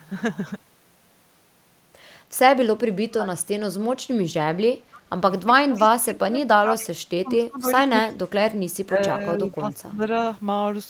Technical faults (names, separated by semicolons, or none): speech suppressed in double talk; echo leak